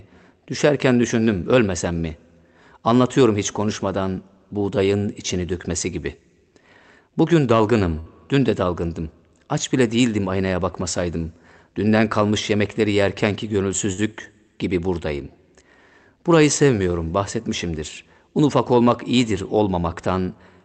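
Two bursts of packet loss hit the call, where consecutive packets never arrived in time and the receiver papered over each gap by extending the last sound and fading it down. From 7.99 to 8.10 s, just before "dün de dalgındım", about 60 ms of speech is replaced by this dwindling continuation. From 13.93 to 14.01 s, between "kalmış yemekleri yerkenki" and "gibi buradayım", it happens again. Each time the speech resumes with a short stretch skipped, inside a band limited near 8 kHz, consistent with Opus at around 32 kbps.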